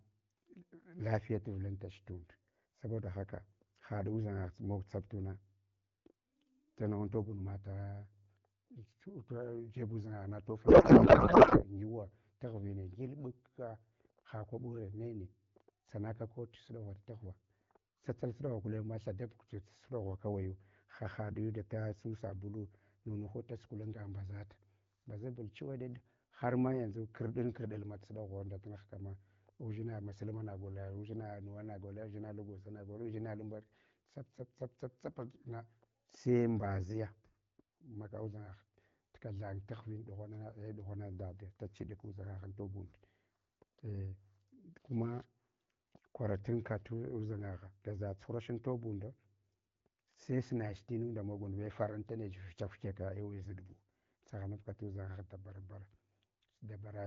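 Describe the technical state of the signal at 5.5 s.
At 5.5 s the audio is intact, with the speech carried cleanly through the AMR wideband (HD Voice) codec at 12.65 kbit/s.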